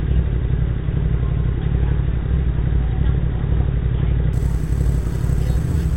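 Imaging from sample-and-hold upsampling runs from 4.33 s to the end of the clip. Here the rate was raised by holding each sample for several output samples with no smoothing filter, which fits a conversion from 8 kHz up to 44.1 kHz. Mirror copies of the sound's spectrum appear above the old band, the lowest filling 4 to 8 kHz at about 30 dB below the signal. They add a bright metallic fizz that tracks the sound's level.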